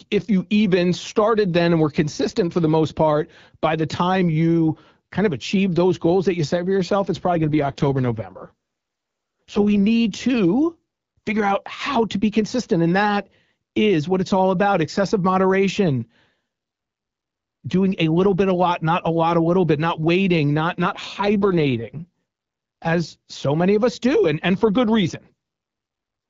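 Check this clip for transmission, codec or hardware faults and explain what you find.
The speech clip has two AMR rate drops, heard as brief stretches of roughness within an AMR-WB (HD Voice) call with light codec wear.

From 7.34 to 9.84 s, after "set for yourself it's" and until "to figure out how", and again from 20.82 to 22.05 s, after "bit not waiting not", the codec's bitrate is cut to save bits for error protection on a weak link. The texture fits a drop from 12.65 to 6.6 kbit/s. The band stays intact and nothing drops out, but the voice turns raspy and synthetic until the rate recovers.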